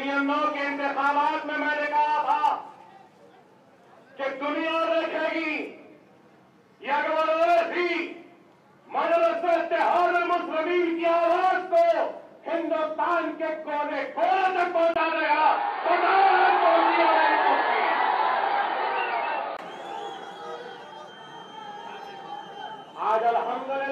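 The audio has one fault. At 14.94 s the sound turns dull and boxy. A gap of about 20 ms marks the change. From there to 19.59 s, nothing reaches above 4.7 kHz. A faint new background noise sits roughly 40 dB under the signal. The overall level barely moves. Then the full band returns. This is likely an input switched to a poorer device, such as another microphone or a headset's narrower call profile.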